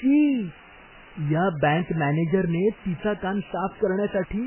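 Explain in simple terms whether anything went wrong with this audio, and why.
Two faults run through the whole recording, from start to end.

The first is low bit depth with dither. The speech is stored with very few steps of loudness, which fits about 6-bit audio, and the rounding error was spread out as noise. You hear it as a constant, even hiss under the voice. Unlike compression damage, it stays the same throughout and adds no distortion or warbling.

The second is heavy damage of the sort MP3 compression leaves, with a very low data rate the likely cause. Nothing is left above 3.1 kHz, so the voice sounds dull and muffled. Weak parts of the sound flicker in and out, giving a watery, swirly quality, and the starts of sounds are smeared. Unlike the hiss, this damage shifts from moment to moment with the speech.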